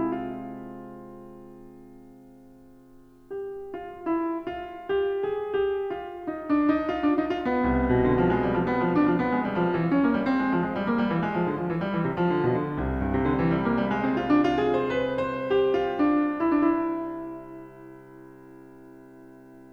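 No faults are audible anywhere in this music.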